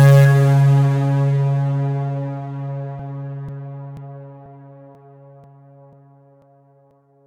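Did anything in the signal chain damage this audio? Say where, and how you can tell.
Yes, at the driver or buffer stage: periodic USB or driver dropouts from 2.99 s to 6.91 s. The music carries a regular tick about every 0.49 s, around ten in all, each where roughly 10 ms of audio is skipped outright, so the waveform jumps rather than falling silent. Something is blocking the bus or driver on a fixed schedule. The strict metronomic spacing separates this from network packet loss, whose gaps fall irregularly.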